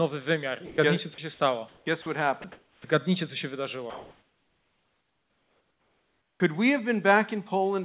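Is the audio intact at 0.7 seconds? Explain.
No. Around 0.7 s the audio has sound dropped by the voice detector, spanning 0.66 to 0.78 s. The sender's voice activity detector likely judged a quiet stretch of speech to be background and stopped transmitting, so the receiver filled the 120 ms gap with generated comfort noise. About 110 ms of real speech is missing: the speech gives way to steady noise or near silence, then resumes once detection picks it up again.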